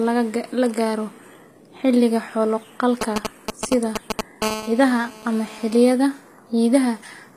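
Speech recording with a gritty, lispy treble throughout, where sibilants sound metallic and nothing is present above 15.5 kHz. This is likely HE-AAC compression, with spectral band replication rebuilding the upper band from copied lower harmonics, which fits a low bitrate near 24 kbps. From 3.01 to 4.21 s, GSM signalling bursts appear as a galloping dit-dit-dit pattern of short 217 Hz buzzes at roughly the level of the speech. This comes from a nearby 2G phone sending intermittent radio bursts that the audio circuit rectifies. From 4.42 to 5.94 s, a steady GSM phone buzz takes over, a hard, raspy 217 Hz tone rich in harmonics at about 12 dB below the speech. Here the phone is in a call, transmitting continuously at its burst rate.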